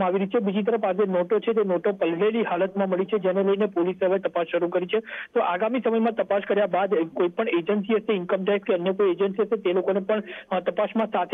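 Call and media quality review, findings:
Nothing to flag here; no audible faults or glitches anywhere in the clip, so no components to chase down.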